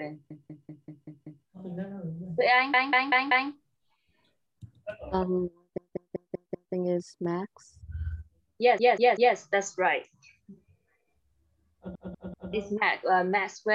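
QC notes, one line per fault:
0.30 to 1.46 s, 2.74 to 3.50 s, 5.78 to 6.74 s, 8.78 to 9.36 s and 11.95 to 12.53 s, repeated frames: the same 192 ms chunk loops six, four, five, three and three extra times, giving a stutter. A run of compressed frames got written out more than once, and each spot stretches the audio by 0.58 to 1.15 s.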